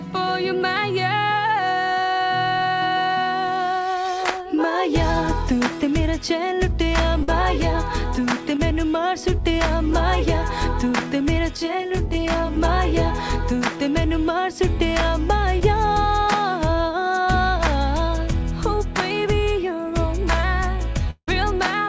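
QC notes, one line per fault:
7.23–7.29 s, burst of packet loss: about 50 ms of audio is gone and the receiver stretches the last sound across the gap, fading it as it goes. The audio then picks up further on. Unlike a short concealed loss, this is a held, fading smear, and material is actually skipped.
15.60–15.62 s, short concealed packet loss: only about 10 ms went missing, and the decoder patches it by extending the preceding sound before blending back in. It comes across as a tiny smear or wobble, far briefer than the 7.2 s burst.
21.11–21.28 s, long network dropout: the sound continues as a fading buzz or hiss across a gap of about 170 ms, the last roughly 60 ms of it near silence, before returning further on. The cause is likely a network stall. The audible fall to silence separates this from a packet-loss burst, all within the G.722 call's 8 kHz-limited band.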